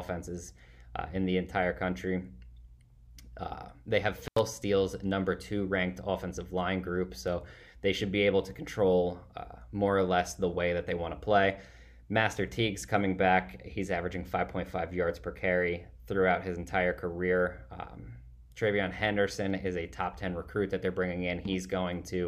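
At 4.25 s the audio drops out abruptly, with a crackle at each edge and only faint hiss left underneath, for about 87 ms before it returns at 4.39 s. This is an intermittent contact: a loose cable or plug briefly opening the signal path.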